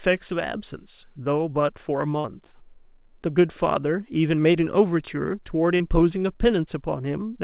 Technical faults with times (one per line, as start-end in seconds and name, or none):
2.20-2.26 short concealed packet loss
5.76-5.82 short concealed packet loss